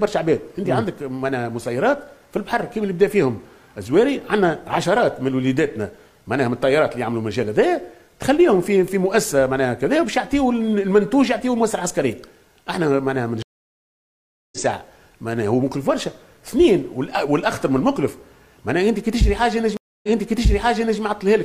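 A stream reconnect happens twice: the connection dropped and the player restarted its decoder mid-stream. At 13.42 s the audio falls silent for 1.1 s and resumes roughly 0.7 s further on. At 19.77 s a 0.26 s gap ends with 0.98 s repeated.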